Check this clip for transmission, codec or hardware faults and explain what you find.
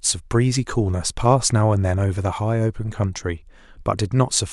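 Checking the clip turns up no faults to explain.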